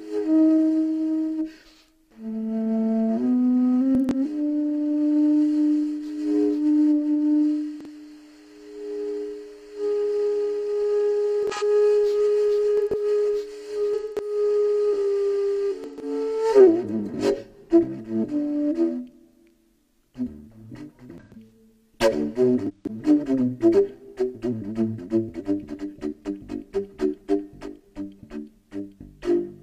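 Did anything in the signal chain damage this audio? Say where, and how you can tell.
Yes. At the codec stage, corrupt frames were concealed at 3.95–4.19, 11.43–11.63, 12.77–13.02, 13.94–14.35, 15.84–16.08, 21.18–21.46 and 22.67–22.95 s. The decoder detected the damage and muted or replaced those frames, leaving holes rather than new sounds, with timing kept.

Also in the codec, a corrupt frame was decoded at 7.81–7.87 s. The decoder played the bad data, producing a short burst of misplaced energy at about -30 dBFS. Unlike concealment, this adds a sound instead of leaving a gap.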